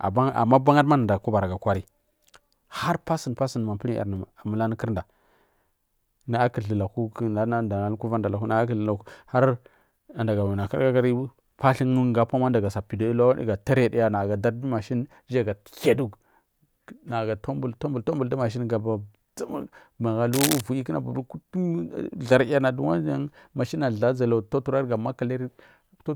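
At 20.33 s there's a burst of cable scratch noise lasting until 20.61 s, rough rustling only slightly below the speech, likely from a worn connector being moved.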